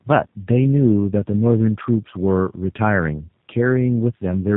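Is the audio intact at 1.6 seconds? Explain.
No. At 1.6 seconds, as throughout the clip, the speech carries tandem speech coding. It sounds like two passes through a low-rate coder of the G.729A kind, joined by a plain telephone-grade link. The second coder rebuilds speech from the first one's already damaged output, so the errors stack: rougher, more warbly and more muffled than a single pass, with nothing above 3.8 kHz. A simple band limit would dull the sound without that compounded grit and wobble.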